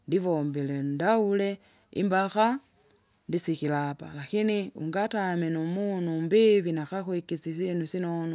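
Nothing to flag here: the recording runs along without a single dropout, glitch or distortion anywhere in it.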